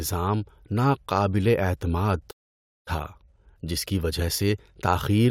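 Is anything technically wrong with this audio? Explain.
Yes. At 2.30 s the speech cuts out mid-flow and stays silent until 2.88 s, about 0.56 s. This is a playback stall. The player likely ran short of data or was blocked, so output stopped until it recovered.

From 2.88 s to the end, the speech runs hurried at normal pitch, about 1.15 times speed. This is time-compressed catch-up. The player trims its backlog by removing small slices and cross-fading the joins.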